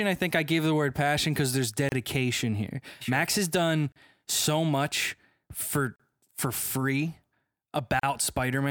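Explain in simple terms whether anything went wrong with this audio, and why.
Something did go wrong: the speech drops out briefly at 1.89 s, 3.92 s, 5.96 s and 8.00 s, roughly every 2 seconds. Each dropout lasts about 30 to 38 milliseconds, and the speech resumes where it stopped. This is a gap at a join of encoded pieces. The audio was compressed in separate chunks and stitched together untrimmed, so each chunk's built-in silent padding remains as a small hole with softened edges.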